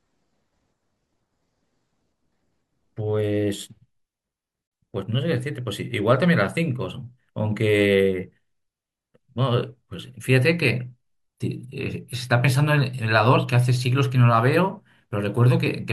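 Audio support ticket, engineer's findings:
Speech mutes abruptly at 4.67 s for about 43 ms, resuming at 4.72 s. Digital broadcast dropout at the receiver: a failed or missing frame triggered muting until valid data returned. Gap length fits a single lost frame. Audio in gap unrecoverable.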